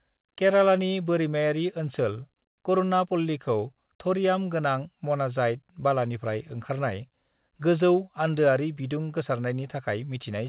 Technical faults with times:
none

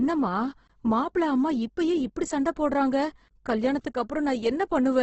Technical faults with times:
0.00-5.03 Opus compression

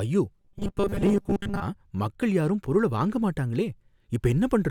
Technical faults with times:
0.40-1.62 robotic sound from repeated short buffers

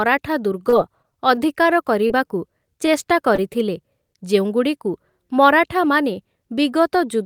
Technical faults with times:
0.69-0.74 short concealed packet loss
1.02-1.13 short concealed packet loss
1.35-1.39 short stall from a late packet
2.07-2.12 short concealed packet loss
2.86-2.90 short stall from a late packet
3.36-3.39 short concealed packet loss

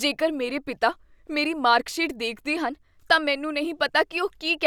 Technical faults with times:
2.60-4.66 drift correction step

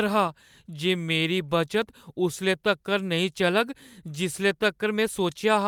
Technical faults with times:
none

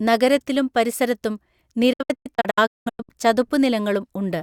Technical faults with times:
1.93-3.09 digital broadcast dropout

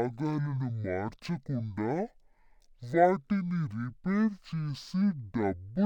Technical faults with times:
0.00-5.85 stereo read as mono

